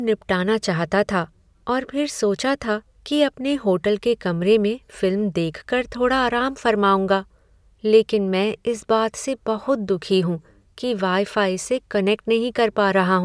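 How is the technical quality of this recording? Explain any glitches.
There are no glitches to explain in this speech recording. No technical fault turns up anywhere in it.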